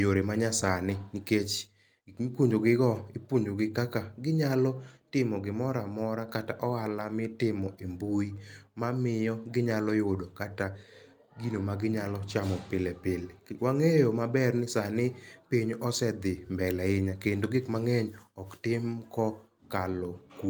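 No technical faults can be heard anywhere in the recording.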